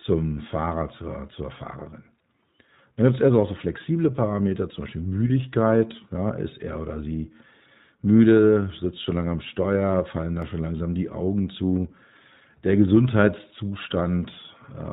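The iLBC codec affects the whole clip, and its damage is plainly audible. Nothing above 4 kHz passes, and the speech sounds rough and synthetic; each frame's excitation is coded on its own. The frame rhythm points to 20 ms frames, which fits the 15.2 kbps mode.

Lost iLBC frames occur from 5.28 to 5.31 s, a gap that fits one missing 20 ms frame. The decoder fills it by repeating the last pitch cycle mixed with noise, so it sounds like a brief held, buzzy or breathy vowel. The speech recovers almost immediately because iLBC frames stand alone.

A block of digital silence appears at 10.42 s, between "fallen da" and "schon langsam die". It lasts about 0.5 ms, so it is heard as a tick or dip rather than silence. Either the output buffer went unfilled in time or a calculation produced invalid numbers.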